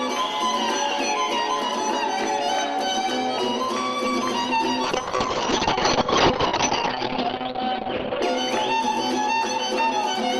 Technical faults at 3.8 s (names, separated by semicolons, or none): none